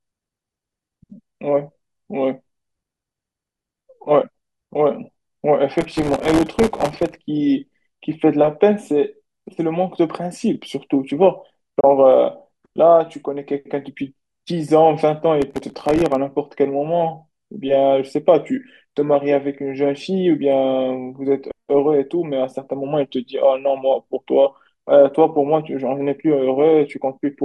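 From 5.78 to 7.19 s, and again from 15.42 to 16.15 s, there's processor overload crackle: a run of tiny buffers, a millisecond or two each, missed their deadlines and dropped to silence, so you get gritty tearing over the speech. At 11.80 s a digital broadcast dropout fades out over 8 ms and leaves a 24 ms hole, because the receiver lost a frame and muted until good data returned.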